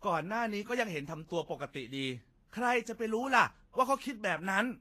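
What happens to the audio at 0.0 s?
From 0.0 s the speech already carries the grainy, hissy texture of Vorbis compression, and it persists to the end. Nothing is present above 14.2 kHz, and the treble that remains is rough and noisy, with consonant onsets softened. The likely cause is a low-quality Vorbis encode, consistent with a bitrate around 33 kbps. At that rate the coder keeps the broad spectral shape but quantises the high-frequency detail so coarsely that it turns into noise-like grit.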